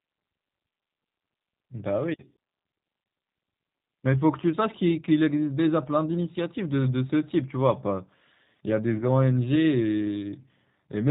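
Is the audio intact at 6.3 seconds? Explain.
No, not really. At 6.3 s you're hearing the same G.729 codec damage that runs through the whole speech clip, and it's plainly audible. The speech is rebuilt from a vocal tract filter, a pitch predictor and a few coded pulses per 5 ms subframe, rather than the actual waveform, and nothing survives above 4 kHz. It comes across as muffled, slightly rough and synthetic, which fits an 8 kbit/s VoIP stream.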